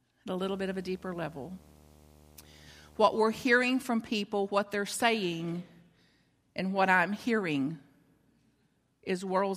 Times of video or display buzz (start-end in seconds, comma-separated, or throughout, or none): 0.42-3.18